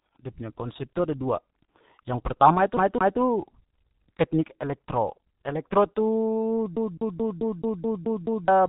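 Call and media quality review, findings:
G.723.1 codec artefacts throughout speech: muffled, hoarse timbre, smeared consonants, no content above 3.8 kHz. Heavy damage consistent with 6.3 kbit/s mode. Cause: 30 ms frames and slow-updating vocal model discard fine spectral and transient detail.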